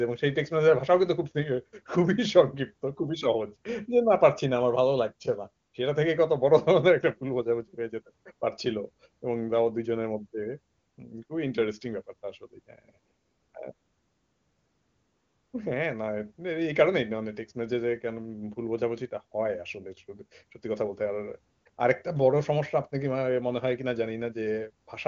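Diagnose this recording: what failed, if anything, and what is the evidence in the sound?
AMR comfort noise, from call-side discontinuous transmission: ten pauses between 5.65 and 24.87 s, 20 ms to 1.8 s long (longest 13.73 to 15.53 s), replace the real background with steady synthetic hiss. A spectrogram shows flat, featureless patches with abrupt edges.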